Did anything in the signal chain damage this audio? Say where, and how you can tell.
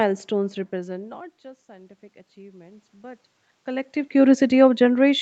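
Yes. Automatic gain rising in the call processing: from 0.71 s to 3.97 s the level climbs by about 5 dB after the input fell by about 24 dB. Room noise swells along with the speech, which a talker moving near 0.5 s alone wouldn't cause.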